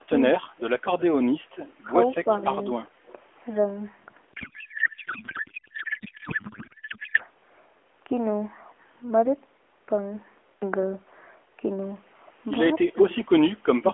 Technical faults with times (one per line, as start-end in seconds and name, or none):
4.34-7.21 codec payload misread